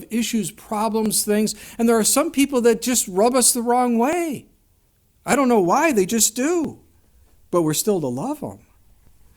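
Four single sharp clicks land at 1.06, 2.05, 4.13 and 6.65 seconds, each a brief tick with nothing audibly missing. They point to likely dropped samples: about 0.7 ms of the stream vanishes, so the waveform jumps abruptly to a later value.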